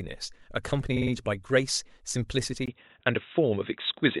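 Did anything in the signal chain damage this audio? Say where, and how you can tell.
Yes. Repeated frames at the codec or storage stage: a 52.2 ms block replays three extra times at 0.96–1.11 s (adding 156.7 ms) and once more at 2.89–2.94 s. Identical stutters, not gaps, rule out dropouts.

Input switched to a poorer device, likely at the driver level: from 2.66 s, after a 20 ms silence, nothing passes above 3.8 kHz, level shifts about 5 dB, and a new noise floor appears. That noise change separates it from a codec low-pass.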